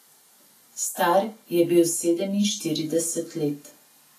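Throughout the speech, there is grainy, hissy roughness in the upper range, and nothing is heard above 14.2 kHz. This is likely Vorbis compression at a low setting, which fits a bitrate near 32 kbps. Treble detail was quantised coarsely, leaving noise where fine structure was.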